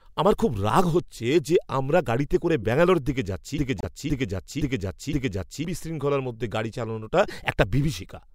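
At 2.63–2.65 s a faint blip of misplaced energy, peaking around -35 dBFS, cuts into the speech. It is a corrupt frame decoded: a couple of damaged compressed frames were played anyway, putting energy at the wrong frequencies. From 3.58 to 5.65 s a 0.52 s fragment repeats exactly four times back to back, replacing the speech that should have played. This broken-record loop likely comes from a stalled player or stream resending its last fragment. Inside that stretch, at 3.79–3.85 s, the sound drops abruptly to silence for 58 ms, roughly two frame lengths. This is a corrupt frame muted: the decoder rejected damaged frames and silence filled their slot. At 7.28–7.30 s a louder chirp, about -25 dBFS, is another corrupt frame decoded, spread across several damaged frames.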